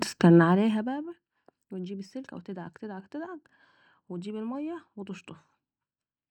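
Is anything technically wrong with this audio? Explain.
Yes. From 0.39 to 1.04 s there is zipper noise: the level drops by roughly 20 dB in discrete jumps, around 150 a second, instead of gliding down. Each jump is a tiny discontinuity, so a fine ticking buzz rides on the speech while the level falls. On a waveform the envelope looks like a staircase. A spectrogram shows faint vertical broadband striations repeating evenly through that span.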